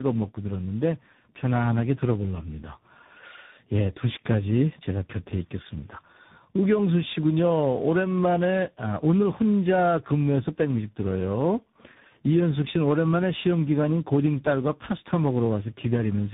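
From the first second to the end, this speech has the classic sound of tandem speech coding: it seems to have been decoded and re-encoded at several network hand-offs, with something like three separate speech coders stacked up, likely ending in a CVSD-style stage. Each one chews on the previous one's mess, so the voice comes out rough, muffled and warbly, and there's essentially nothing left above about 3.8 kHz.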